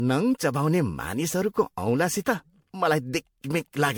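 Repeated MP3 re-encoding, likely about ten passes at a level fitting 96 kbit/s, causes generation loss throughout: the speech sounds swirly, hollow and smeared, with blurred attacks.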